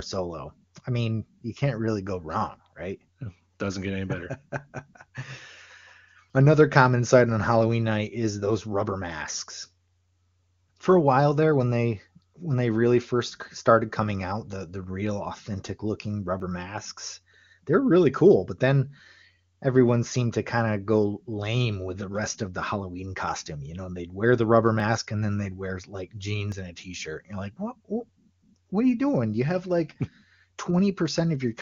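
At 6.3 s, 16.4 s, 24.8 s and 26.52 s the speech jumps ahead, likely a dropped buffer (overrun). Around 70 ms vanishes first, then about 20 ms each time. The waveform shows abrupt splices without silence, and the spectrogram shows thin vertical streaks.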